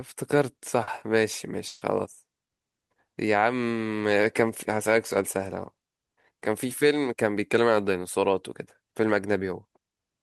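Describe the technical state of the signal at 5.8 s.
At 5.8 s the speech plays through intact, with no dropout, distortion, glitch or other fault in the signal at that moment.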